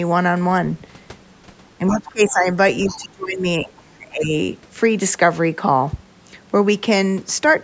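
A speech recording in which the talker's voice twice sinks while someone else is also talking. From 1.78 to 2.46 s it dips by about 20 dB, with roughly half a second of that span turned down. From 2.87 to 4.32 s it drops harder, by about 30 dB at its deepest, over roughly a second and a half. This is speech suppressed in double talk. The likely cause is an echo canceller that could not tell the local talker apart from the loudspeaker echo while both sides spoke at once, and so attenuated everything. In the same stretches, faint scraps of the other side's voice leak through at 1.91–1.98 s, 2.29–2.33 s and 2.87–3.05 s, sitting about 20 to 25 dB below the talker. These are short and fragmentary rather than a continuous second voice, and they are likely residual far-end echo that the canceller failed to remove from the microphone signal. The call microphone processing is audible in the band limit, with no content above 8 kHz.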